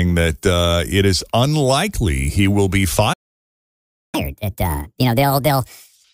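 It's a speech clip with a playback stall and a catch-up at higher speed. At 3.13 s the speech cuts out and there's dead silence for about a second, until 4.15 s. That's most likely the player running dry of buffered data, or its playback thread getting blocked, so nothing reaches the output until it recovers. Then from 4.15 s to 6.04 s it plays the backlog at 1.5 times normal speed by resampling, so the talking rushes along and sounds noticeably chipmunky, up around seven semitones, before settling back to normal pace and pitch. That burst is the player clawing back most of the second it lost during the stall.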